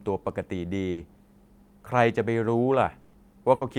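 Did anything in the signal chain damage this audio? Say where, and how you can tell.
Yes, the network stage damaged this speech in three places: at 0.91 s, at 3.01 s and at 3.55 s, the sound briefly freezes into a held buzz or fading hiss, then jumps ahead. This is burst of packet loss. The receiver concealed 60, 120 and 60 ms of missing audio by stretching the last sound, so that stretch of speech is lost.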